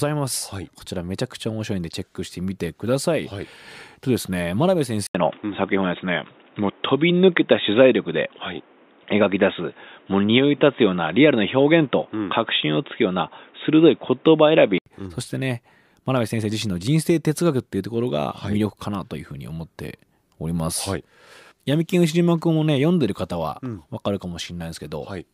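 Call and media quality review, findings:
Input likely switched to a poorer device, 5.07–14.86 s. Narrower capture band: nothing above 3.8 kHz, speech dull and boxy. 80 ms dropout at switch, modest level jump, new noise floor well below speech. Full band back at 14.86 s.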